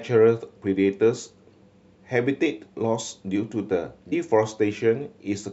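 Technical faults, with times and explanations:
4.11 s, damaged data in a compressed stream: a brief glitch cuts into the speech. Some bytes in the encoded stream were corrupted there. The decoder misread those frames and lost sync. It then hunted for the next valid frame header, leaving a short blip.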